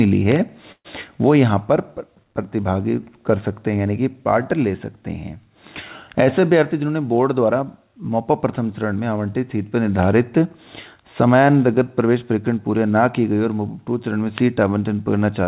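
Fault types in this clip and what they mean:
call audio freeze: At 0.72 s the sound stalls into a fading buzz or hiss that sinks to 60 ms of silence, then picks up exactly where it stopped at 0.87 s, with nothing lost. Delayed packets likely emptied the jitter buffer, inserting a 126 ms gap.
jitter buffer speed-up: From 6.59 to 7.86 s the sound runs at 109% speed with unchanged pitch and feels hurried. The receiver cut many tiny pitch-period slices, roughly 150 ms in all, to drain excess buffered audio and shrink the delay.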